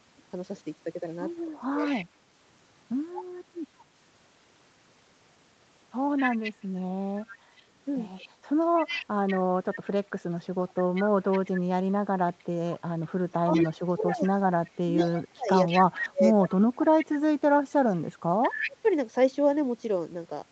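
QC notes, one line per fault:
1.46–2.30 s, 9.75–9.93 s, 13.29–18.88 s: speech suppressed in double talk. The level dips by about 25 to 35 dB. The echo canceller likely turned down its own talker along with the echo during overlapping talk.
1.83–2.05 s, 3.16–3.85 s, 6.17–9.76 s, 10.68–12.44 s, 13.53–18.70 s: echo leak. A copy trails the speech by 188 ms, about 10 to 15 dB below it. This is likely loudspeaker echo that the canceller missed.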